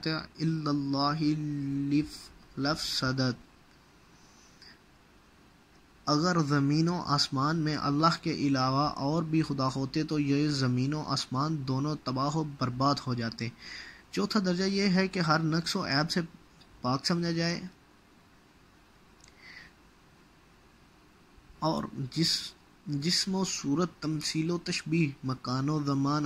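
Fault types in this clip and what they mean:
No technical faults can be heard anywhere in the audio.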